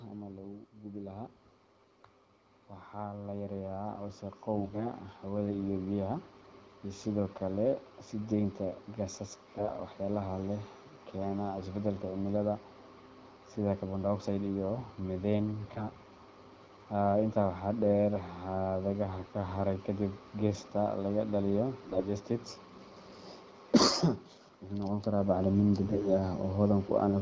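From 2.96 to 5.66 s, automatic gain rising: the gain control judged the input too quiet and raised its gain by about 10 dB over nearly three seconds. The speech and the background noise behind it swell together, so the room seems to creep closer rather than the talker simply getting louder.

AMR bit errors then strike five times, at 4.58 to 4.86 s, 9.55 to 9.71 s, 15.68 to 15.86 s, 21.88 to 22.04 s (just after "laga dhaliyo"), and 25.84 to 26.10 s. On a weak link the less protected bits of the wideband AMR frames arrived flipped while the check on the essential bits still passed, so the decoder trusted bad data. The speech keeps roughly its pitch and level but turns hoarse, scratchy and gargly for a fraction of a second each time. The burst after "laga dhaliyo" had the largest share of its bits corrupted, and the first burst lands while the gain is still rising.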